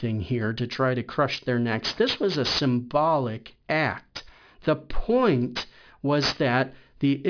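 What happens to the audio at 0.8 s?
At 0.8 s the speech carries aliasing, which runs through the whole clip rather than starting there. The audio was downsampled without an anti-alias filter, and the result points to a new rate near 11 kHz, so content above the 5.5 kHz fold was mirrored back down as false, unrelated tones, roughly 15 dB below the speech. Sibilants sound gritty and metallic. On a spectrogram, energy runs hard up to the 5.5 kHz edge, with mirrored streaks moving opposite to the real harmonics.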